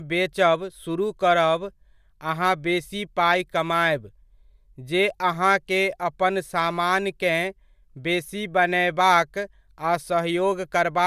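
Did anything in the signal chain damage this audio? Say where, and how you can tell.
No, nothing in the chain audibly damaged this speech recording, from capture through playback.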